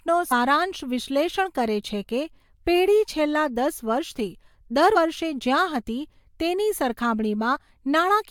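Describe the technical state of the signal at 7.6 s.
Compressed frames are skipped at 7.55 to 7.57 s. A couple of frames never reach the decoder intact, so the speech jumps forward by around 40 ms. It is heard as a brief break at the join where the speech jumps ahead.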